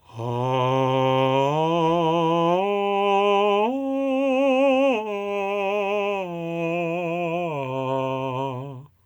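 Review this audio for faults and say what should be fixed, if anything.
Nothing to fix: no faults found in the music.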